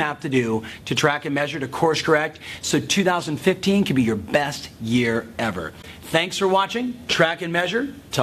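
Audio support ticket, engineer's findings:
Brief fault at 5.81–5.85 s, about 36 ms. Corrupt frame concealed in the AAC decoder: it detected damaged bits and muted or substituted the frame. The length fits a single damaged frame.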